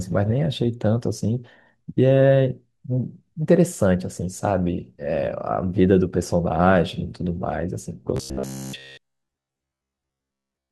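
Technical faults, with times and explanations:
8.17 to 10.71 s, robotic sound from repeated short buffers: the speech hardens into a rigid metallic buzz at 66.8 Hz that only loosely follows the syllables. The likely cause is new audio arriving too slowly, so a roughly 15 ms slice keeps being replayed while real audio is skipped. Most of this stretch is repeats. On a spectrogram, flat harmonics spaced 66.8 Hz apart replace the natural pitch movement, and the waveform shows identical short cycles stamped out back to back.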